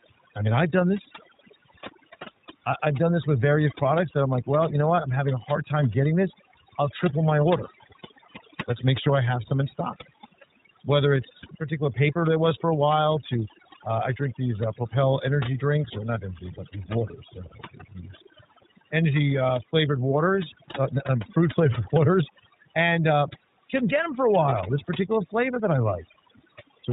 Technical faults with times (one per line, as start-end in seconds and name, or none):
0.00-26.93 overdone noise removal
0.00-26.93 iLBC codec